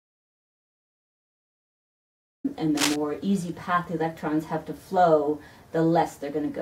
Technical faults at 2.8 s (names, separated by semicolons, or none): cable scratch noise